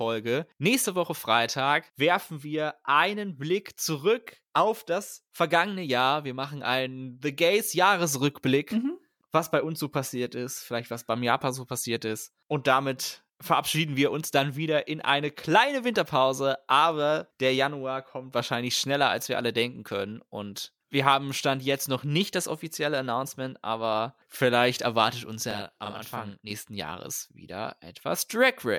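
From 25.51 s to 26.51 s the speech turns doubled, as if a second copy trails closely behind at the same level, giving a thickened, slapback quality for about one second. This is channel delay (doubling): one channel runs about 40 ms late relative to the other, and when the two are summed to mono the late copy sits far enough behind to be heard as a separate repeat rather than blending in.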